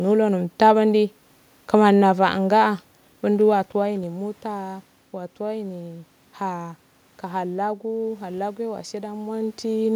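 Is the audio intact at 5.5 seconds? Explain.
Yes, the audio is intact at 5.5 seconds, with no system fault at that point in the speech.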